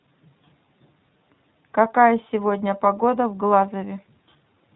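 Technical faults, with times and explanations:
Throughout, iLBC codec: the speech has been squeezed through a narrowband voice codec that codes each short frame's excitation independently, consistent with 20 ms frames at about 15 kbps. Everything above 4 kHz is gone, so the speech sounds muffled, plainly rough and slightly synthetic.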